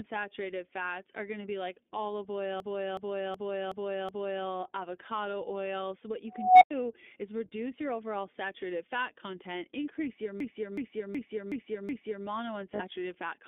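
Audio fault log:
Throughout, iLBC codec: the speech is narrowband, held to roughly 250 Hz to 3.6 kHz with nothing above, and has a plainly audible rough, slightly synthetic texture. Each 20 ms frame's excitation is coded on its own at 15.2 kbps, which gives the speech that grainy, processed quality.
2.60 to 4.46 s and 10.40 to 12.26 s, system hang loop: each time, a 371.52 ms stretch of speech repeats exactly five times, a stutter at 2.69 Hz. The playback hardware kept cycling one ring buffer while the system stalled, which fits a 16384-sample buffer.
6.28 to 6.71 s, unstable filter: a tone near 700 Hz swells over about 327 ms into a loud squeal, then the sound drops out for about 99 ms. A recursive filter with bad coefficients ran away until its output overflowed and the filter reset.
12.75 s, lost iLBC frames: a 40 ms gap is filled by a held, slightly buzzy vowel-like sound as the decoder repeats the last pitch cycle mixed with noise. 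Because iLBC frames decode independently, the speech snaps back immediately afterwards.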